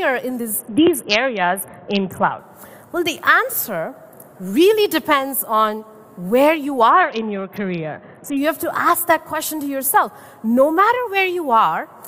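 From 0.59 to 2.39 s, and again from 6.90 to 8.37 s, the treble goes dull and a gritty, grainy noise rises, which is a Bluetooth SBC bit pool drop. The link squeezed the encoder's bit allocation, pointing to a fall from a bit pool of 28 to 6, near 60 kbps, so the top sub-bands starve and the rest are coarsely quantised. Unlike a plain low-pass, the grit arrives with the dulling, and both lift cleanly when the rate recovers.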